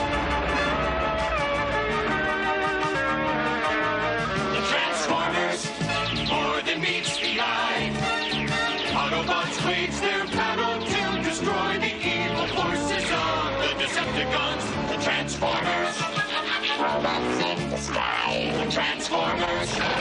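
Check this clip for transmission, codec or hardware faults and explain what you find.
One fault is present. At 2.94 s there is a brief burst of damaged data in a compressed stream. A short run of corrupted frames throws the decoder out of sync. It hunts for the next valid frame header. The result is a quick glitch, about 20 ms long.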